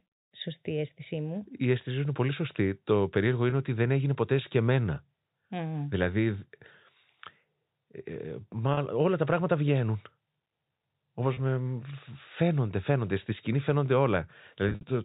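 Packet loss with pitch repetition shows up four times. At 3.50–3.52 s, right before "ότι δεν έγινε ποτέ", about 20 ms goes missing, then 30 ms each at 8.74–8.77 s and 11.34–11.37 s, which fits two or three lost 10 ms packets. The receiver fills each gap by looping the last pitch period, so you get a brief held, buzzy smear. At 14.69–14.83 s, losses totalling 110 ms scatter over 140 ms, with the longest run 60 ms, long enough that the repeat fades toward silence before the speech cross-fades back, all through the narrowband G.711 telephone coding.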